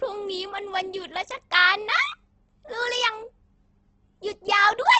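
Across the whole clip the speech carries heavy damage that is likely from Opus compression. Nothing survives above 8.2 kHz, and the bands that remain sound rough and grainy rather than hollow, because the encoder preserves each band's energy but fills underfunded bands with noise or folded copies of lower ones. The texture points to the music-oriented mode at a very low rate, which fits something around 12 kbps with wideband bandwidth.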